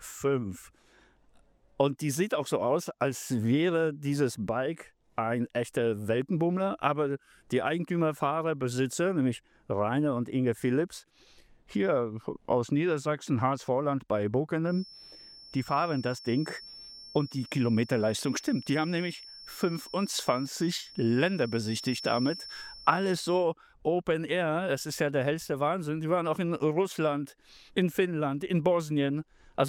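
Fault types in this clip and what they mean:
feedback whistle: a steady 5.4 kHz tone, about 20 dB under the sound, swelling and fading slowly in level from 14.61 to 23.49 s, likely a loudspeaker-microphone loop held just short of runaway, unlike a growing howl.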